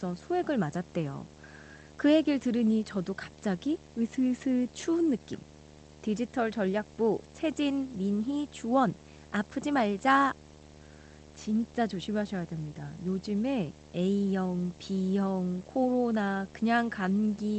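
A video or display buzz runs under the speech for the whole clip. A screen or video cable is coupling into the audio path, producing a steady 75 Hz buzz at the picture's field rate with hash above it, sitting roughly 20 dB below the speech. The call-codec coding noise and top end ending near 8 kHz belong to the call path.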